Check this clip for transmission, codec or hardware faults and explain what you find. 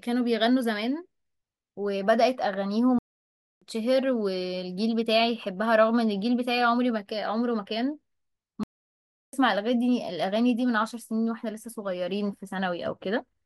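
Two playback stalls interrupt the speech. From 2.99 to 3.62 s and again from 8.63 to 9.33 s, the output drops to silence for about 0.63 s and 0.70 s, then resumes. The likely cause is the player running short of data or its thread being blocked.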